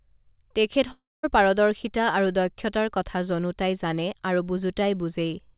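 At 0.92 s the speech gives way to a fading buzz, then about 0.21 s of silence until 1.25 s, when it resumes with roughly a third of a second gone. That's most likely a long network dropout, heard through a call path capped at 4 kHz.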